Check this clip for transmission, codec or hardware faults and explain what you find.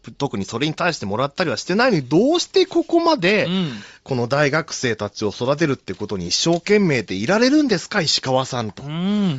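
Bluetooth LC3 compression runs throughout this speech clip, and the codec damage is plainly audible. The upper spectrum has been thinned and filled with noise, leaving a breathy, grainy edge. That fits 10 ms frames at around 32 kbps. LC3 is the likely cause.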